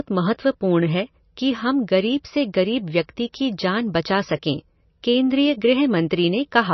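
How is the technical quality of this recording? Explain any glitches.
Quality is poor. The damage runs through the whole recording. Nothing is heard above 6 kHz, and the speech sounds watery and swirly. The likely cause is heavy MP3 compression, which fits a bitrate near 27 kbps. Short of bits, the encoder cuts the treble and drops weak frequency detail that flickers from frame to frame.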